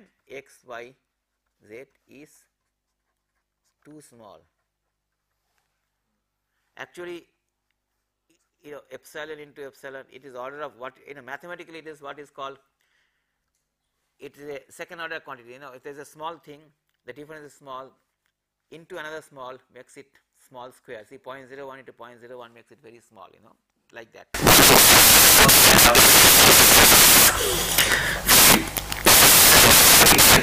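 From 24.34 s to the end of the clip at 30.43 s, the audio becomes loud, harsh broadband noise. These are samples built from the wrong bytes: the reader assembles each sample offset, swapped or misaligned, so rapidly changing low bits dominate every value.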